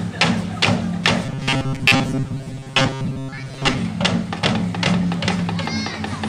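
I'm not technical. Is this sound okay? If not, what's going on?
No. From 1.26 to 3.78 s there's robotic sound from repeated short buffers: a steady metallic buzz near 134 Hz, likely from tiny slices being replayed. Unlike simple dropouts, the sound never goes silent.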